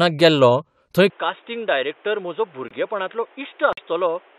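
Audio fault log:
1.10 s to the end: input switched to a poorer device. At 1.10 s the speech abruptly goes dull and boxy with no gap at the changeover. Nothing comes through above 3.8 kHz, the level drops by roughly 10 dB, and a new background noise sits well below the speech. This is likely the recording jumping to a different, lower-grade mic or a headset call profile, which has a narrower band and its own noise floor.
2.68–2.72 s and 3.73–3.79 s: corrupt frame muted. Both are holes of silence that start suddenly and run about 42 ms and 66 ms, with the speech carrying on at the right pace afterwards. That sounds like damaged compressed frames the decoder rejected and the player replaced with silence, so timing holds even though sound is missing. The holes' lengths line up with five and two frames dropped back to back.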